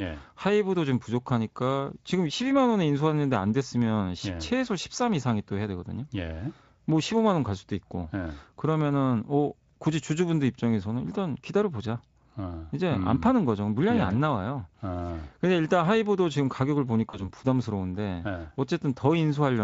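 At about 17.09 s there's a dropout that the speech codec papers over with packet loss concealment. Roughly 40 ms of audio never arrived, which fits two lost 20 ms frames. The decoder kept repeating its last pitch and filter at falling gain, so you get a brief stretched smear fading out. Because each frame leans on the previous one, the speech stays a bit thin until around 17.28 s. The Speex coding underneath sounds only lightly roughened.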